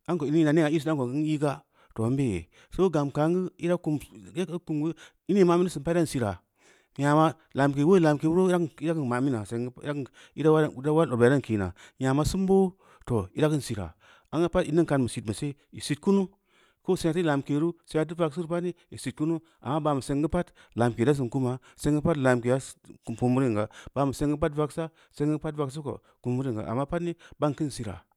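No technical faults turn up anywhere in the speech, so there is nothing to describe in time order.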